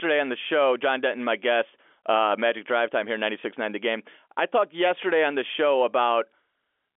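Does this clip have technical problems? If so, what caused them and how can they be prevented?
No, there are no technical problems in this clip.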